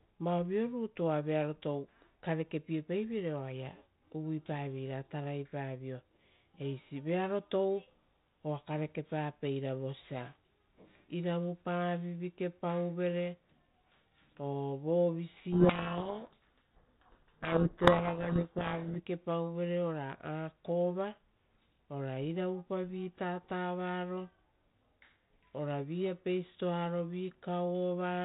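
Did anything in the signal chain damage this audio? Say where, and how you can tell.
Yes. A codec payload misread runs from 15.52 to 19.0 s, at the codec stage. The speech there is buried under harsh, grinding distortion, then comes back. The 4 kHz-limited telephone band of the 32 kbit/s G.726 path carries through. The two ends disagree on the bit order of the G.726 code words. The decoder rebuilds each sample from scrambled difference values and compounds the errors through its adaptive prediction until the packing matches again.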